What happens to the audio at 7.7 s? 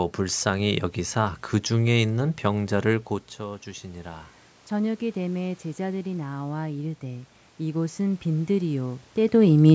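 At 7.7 s, voice and room noise swell together within a gradual lift from 4.98 to 9.1 s. This is automatic gain rising: the gain control adds about 5 dB, winning back only part of a 12 dB input drop.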